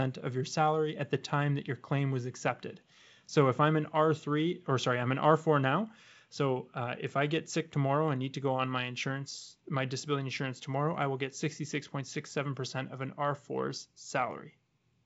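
No technical faults can be heard in this speech recording. It carries the sound of G.722 wideband telephone coding, with speech reaching up to about 7 kHz and at most a faint hiss in the upper band, which fits the codec running at its full 64 kbit/s rate.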